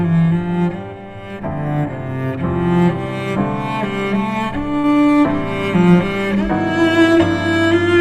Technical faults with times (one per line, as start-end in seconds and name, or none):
4.79-4.85 short concealed packet loss